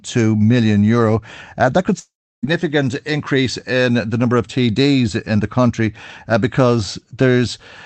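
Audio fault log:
1.99–2.45 s, long network dropout: Right after "euro uh that could", the speech smears into a fading buzz, then near-silence for about 0.33 s. The receiver likely stretched the last sound to cover 0.44 s of missing audio, so speech resumes with that stretch gone.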